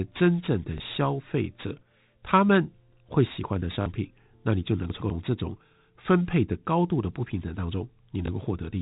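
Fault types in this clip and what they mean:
Packet loss with last packet repeated: dropped audio gets patched by replaying the previous packet, giving a small blip at 0.78 s, a short robotic stutter at 3.82 s (about 40 ms) and a small blip at 8.26 s.
Chunks out of order: around 4.9 to 5.1 s a 100 ms chunk lands one chunk late, so that moment sounds jumbled.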